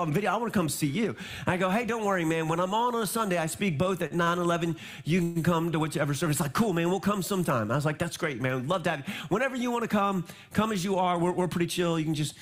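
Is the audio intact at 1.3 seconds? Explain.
Yes, the audio is intact at 1.3 seconds, with no dropout, click, glitch or other fault at that moment.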